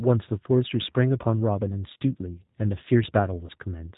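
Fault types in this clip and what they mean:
G.729 codec: The speech sounds narrow, slightly rough and synthetic throughout, with nothing above 4 kHz and a plainly audible coded texture. The quality fits the 8 kbit/s G.729A codec. It rebuilds each 10 ms frame from a vocal tract filter, a pitch predictor and a few pulses rather than sending the waveform, so fine detail and upper harmonics are replaced by an approximation of the voice.
VoIP packet loss concealed by the speech codec: Two brief gaps, around 1.94 to 1.96 s and 3.47 to 3.51 s, sound smeared into a short buzzy or noisy stretch, with the voice weak or distorted for a moment afterwards. Each fits a single lost 20 ms packet. The decoder filled the hole by extending its last pitch and filter settings at falling gain, and because later frames build on that guess, the damage lingers briefly.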